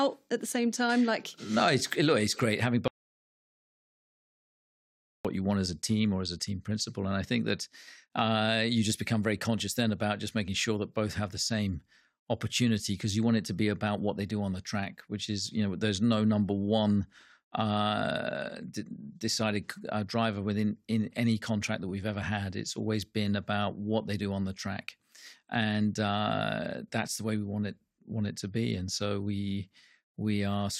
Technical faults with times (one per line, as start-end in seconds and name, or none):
2.88-5.25 audio dropout to silence